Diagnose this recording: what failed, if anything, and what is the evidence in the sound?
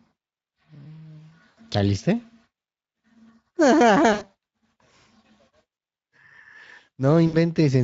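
VoIP packet loss concealed by the speech codec, a network fault, occurs at 1.49–1.58, 4.13–4.26, 5.73–5.77 and 7.27–7.37 s. The Speex decoder replays its last pitch and filter with falling gain, so 40–80 ms of speech becomes a fading buzz or coloured noise. A spectrogram shows flat, smeared energy decaying, with a weak recovery afterward.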